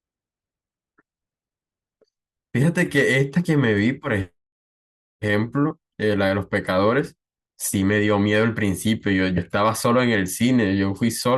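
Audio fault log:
4.03 to 4.09 s, 5.70 to 5.73 s, 9.37 to 9.40 s: compressed frames skipped. Speech jumps ahead about 20 ms, then about 50 ms twice. The skips fit 10 ms frames.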